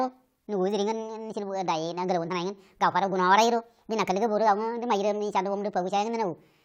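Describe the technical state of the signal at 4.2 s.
At 4.2 s the speech is affected by a wrong sample rate fault that runs through the whole clip. It plays 1.5 times too fast, with pitch raised about 7 semitones, which fits audio recorded at 32 kHz being played at 48 kHz without conversion. Voices sound high and hurried. On a spectrogram, harmonics and formants sit 1.5 times higher and are spaced further apart, and each syllable is compressed in time. On the waveform, the cycles are shorter.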